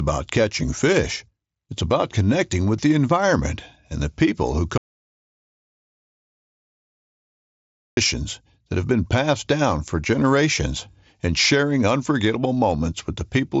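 An audio dropout to silence runs from 4.78 to 7.97 s in this speech clip, right after "and the people who": the talking stops mid-flow and about 3.2 s of silence follows, with no room tone at all, before speech resumes. Whatever was said in that stretch is lost. The most likely cause is the input briefly disconnecting or muting while the recorder kept writing silence. The band-limited sound, with nothing above about 7.7 kHz and a light grain, fits a Bluetooth mSBC headset link.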